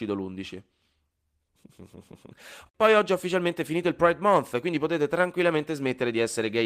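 Speech recording with no audible technical fault anywhere in the clip.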